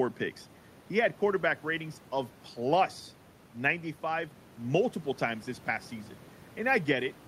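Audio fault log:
No fault was found in this speech clip; the room noise sits about 25 dB below the speech and belongs to the recording.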